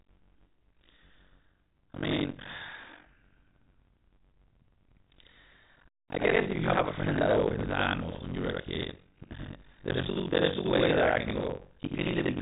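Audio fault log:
throughout, buffer tearing: a 46.9 Hz buzz on the speech, fitting a 1024-sample buffer whose writer and reader cross each period, so about half replays older audio.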